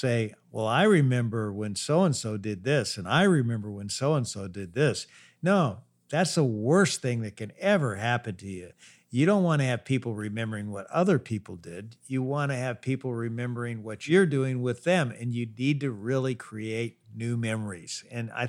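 No technical faults can be heard in this recording.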